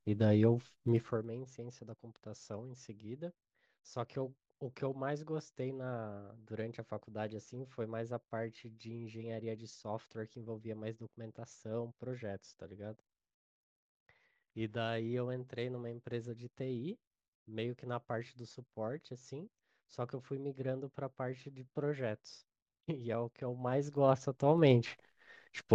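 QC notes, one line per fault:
0.86–1.30 s, zipper noise: the level drops roughly 15 dB in 2 dB jumps, about 30 a second, with no smoothing, so each jump clicks and they blur into a fast buzz. The waveform envelope steps down like a staircase, and the spectrogram shows closely spaced thin vertical broadband lines.
23.41–24.76 s, zipper noise: a rise of roughly 15 dB in 2 dB steps, only about 7 a second, so separate ticks are heard. The waveform shows a coarse staircase climbing, and the spectrogram shows sparse vertical click lines.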